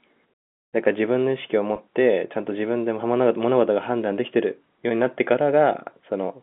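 At 1.76 to 1.78 s there's a packet loss with pitch repetition: a 20 ms gap, fitting one lost packet, patched by looping the last pitch period into a brief held buzz.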